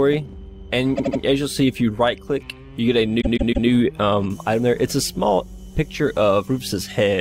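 At 0.96 s a 78 ms block of repeated frames replays three extra times, then at 3.20 s a 157 ms block does the same, a stutter. Waveform and spectrogram show identical tiled segments, adding 0.24 s and 0.47 s.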